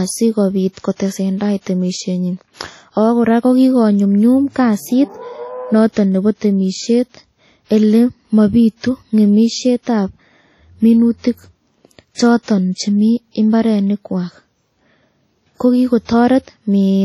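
WMA compression runs through the whole speech clip. Its heavy, ringing, washy texture and breathing hiss likely come from a low-bitrate transform codec, roughly 32 kbps, that discards weak detail and smears quantisation noise across long blocks. Nothing survives above 15.7 kHz.

Pre-echo occurs at 0.96–1.00 s, 1.61–1.66 s, 12.12–12.18 s, 12.43–12.48 s and 16.05–16.09 s. Each time, noise sized for a sharp attack late in a block spills 40 to 59 ms ahead of it, so a brief hiss precedes a softened, smeared onset.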